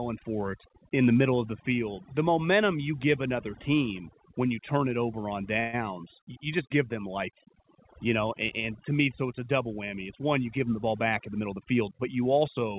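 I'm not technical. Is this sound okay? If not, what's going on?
No, there are three problems.

The first lasts the whole clip. It is overdone noise removal. A cleanup tool was set far too strong. It treats quiet parts of the voice as noise and turns them down along with the hiss. So the background drops and breaks up into small twinkling specks. The clip is also narrow, with nothing above 4 kHz, which is normal for this kind of phone line.

The second is a call audio freeze at 5.6 to 5.84 s. The voice briefly stops moving forward. The last bit of sound is stretched into a short buzz or hiss for about 130 ms. Then the voice carries on where it left off. Nothing is lost, but a small gap is added. The likely cause is that pieces of the audio were held up on their way across the network.

The third is a jitter buffer speed-up from 10.48 to 12.13 s. The receiving end had a backlog of audio. 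To catch up, it cut out many tiny slivers, about 150 ms in total. The pitch stays the same, but the voice runs about 8% faster. It sounds a little hurried.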